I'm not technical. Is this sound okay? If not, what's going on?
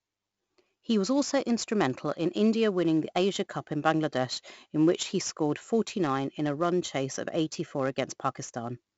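No. 4-bit ADPCM compression affects the whole clip, from start to finish. This method saves space by storing each tiny slice of the speech as a rough guess of how far the sound moved since the last slice. Those guesses are coarse, so a gritty hiss rides along with every louder moment and sharp sounds come out broken. The damage here is heavy, and nothing above about 7.7 kHz survives, so the speech also sounds dull and muffled.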